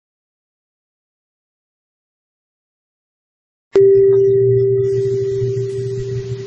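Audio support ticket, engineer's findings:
Truncation distortion on a fade, 0.0 to 3.76 s, during the music. The gain stage keeps too few bits and adds no dither, so the quiet part collapses to coarse square steps and sounds gritty, consistent with about 7-bit resolution.

Low-bitrate audio saved at a high bitrate, throughout. The file is a large MP3, but the music carries the first encoding's artefacts, the sound of a very low-bitrate source, plausibly around 32 kbit/s AAC. Likely a transcode. Re-encoding at 320 kbit/s cannot restore what the first pass discarded.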